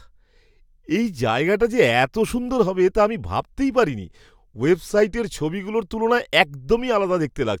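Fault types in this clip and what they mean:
Nothing in the speech stood out as a technical problem on listening.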